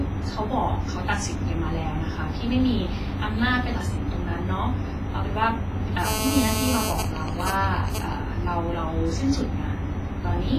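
Spoken audio is carried throughout with heavy transform-codec damage: a ringing, washy smear that spreads around each syllable over tens of milliseconds, a hiss that swells and fades with the signal, and nothing at all above 15.3 kHz. This is most likely WMA compression at a low bitrate, in the region of 24 kbps. Unlike broadband background noise, the hiss rises and falls with the signal rather than sitting at a constant floor. From 6.05 to 6.92 s a GSM phone buzz cuts in. It is a hard, raspy tone at about 217 Hz with a dense stack of harmonics, at about 3 dB below the signal, and it holds steady in level. A 2G handset in a call transmits in bursts at that rate, and the audio circuitry rectifies the radio pulses into sound. Its 217 Hz pitch and gritty texture set it apart from 50 or 60 Hz mains hum, and it bears no relation to the sound around it. At 6.92 s it changes straight into GSM signalling bursts, which continue to 8.13 s and sit a few dB below the signal. 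The continuous buzz gives way to even, regular ticks with a longer 217 Hz buzz twice a second. That pattern is what a phone in a call sends while its user is silent and it transmits only sparse groups of bursts. The ticking rhythm is what distinguishes this from the unbroken buzz just before it.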